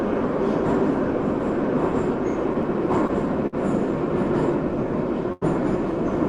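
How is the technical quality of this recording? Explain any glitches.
The recording has three short stalls from late packets, at 3.07 to 3.11 s, 3.47 to 3.55 s and 5.33 to 5.43 s. In each, the jitter buffer ran empty waiting for a packet, so the receiver stretched the last sound by 16, 58 and 89 ms respectively, then resumed where it left off. Nothing is lost, but each stall leaves a sound held too long with a faint buzz or dip. The high frequencies stop at about 12 kHz, which fits the bandwidth of a call codec.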